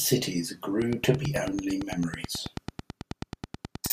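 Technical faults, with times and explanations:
0.82 to 3.93 s, train of clicks: from just under a second in, a steady tick runs to the very end, about 9 clicks a second at an even pace, so around thirty in all. Each one has much the same sharp shape and pokes out around 10 dB above the speech, and you hear it ticking right through the pauses too. A regular pulse train like that is likely interference from nearby gear or a faulty connection or power supply.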